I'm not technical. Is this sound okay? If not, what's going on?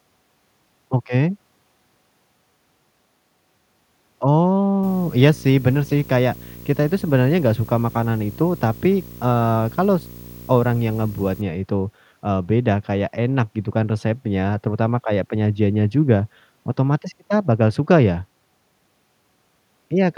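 No. From 4.83 to 11.42 s, just before "itu eee beda kayak", a video or display buzz hums under the speech with a high whine. A nearby screen or video cable is leaking into the audio.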